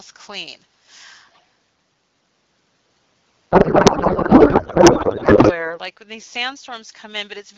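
From 1.31 to 1.46 s a faint delayed copy of the speech trails the direct sound by about 195 ms, sitting roughly 30 dB below it. This is an echo leak, likely a loudspeaker path the far end's echo canceller failed to fully suppress. A spectrogram shows a weak, time-shifted ghost of the preceding harmonic pattern.

From 3.51 to 5.77 s the speech gives way to garbled, warbling noise that barely tracks it, a codec payload misread: octet-aligned AMR frames are being parsed as bandwidth-efficient, so every field is read from the wrong bits. On a spectrogram the harmonics vanish into smeared, irregular energy, and the waveform envelope stops following the syllables.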